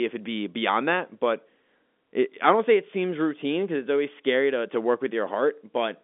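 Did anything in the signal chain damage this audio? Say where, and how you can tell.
No, nothing in the signal chain damaged this audio, which arrives over a G.711 telephone line with nothing above 3.7 kHz.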